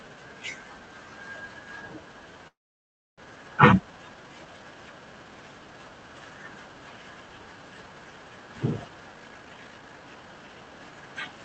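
Speech passing through an Opus call path, where the spectrogram energy stops around 8 kHz, has two faults. From 2.47 to 3.21 s there is a call audio freeze, likely from packets held up in transit until the jitter buffer ran dry. The receiver stretched the last sound into a brief fading buzz, then about 0.65 s of silence. That shows as a short smear trailing into a blank vertical band on the spectrogram and a flat waveform. Speech then resumes where it stopped, so nothing is lost but about 0.7 s of delay is added. From 9.13 to 10.93 s there is a jitter buffer speed-up. The receiver, holding more audio than it wanted, trimmed many short pitch-period slices to catch up, removing roughly 0.7 s. Speech runs at about 139% speed with unchanged pitch, so it sounds hurried. On the spectrogram, syllables and pauses appear squeezed together while harmonic spacing stays the same.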